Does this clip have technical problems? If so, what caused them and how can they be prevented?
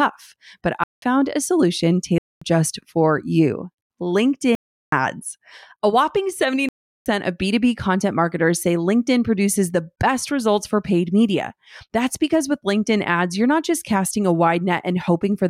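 Yes. The audio program failed to fill its output buffer in time, so it wrote blocks of digital silence. The sound cuts out abruptly and returns:

0.84–1.02 s, just before "a solution"
2.18–2.42 s, between "a solution" and "just for you"
4.55–4.92 s
6.69–7.06 s

The holes last about 0.19 s, 0.23 s and 0.37 s; the first fits an 8192-sample buffer and the last two 16384-sample buffers. A larger buffer or more processing headroom for the audio thread would prevent these dropouts.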